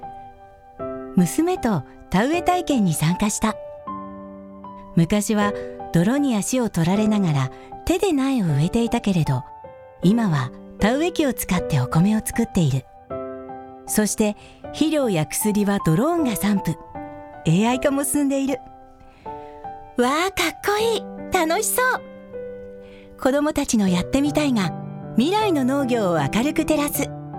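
Nothing here calls for comment, since the audio runs along without any technical fault turning up at any point.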